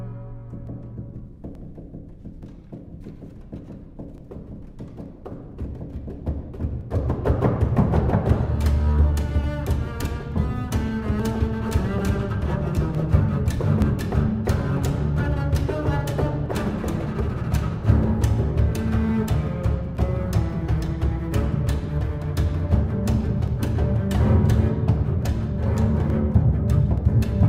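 Clock drift buffer slips from 0.67 to 26.98 s: a regular click every 0.88 s, likely mismatched device clocks around 700 ppm apart dropping or repeating small sample blocks.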